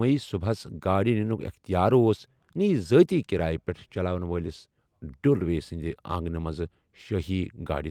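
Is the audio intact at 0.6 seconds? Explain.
Yes, the speech at 0.6 seconds plays through cleanly with no audible fault at that point.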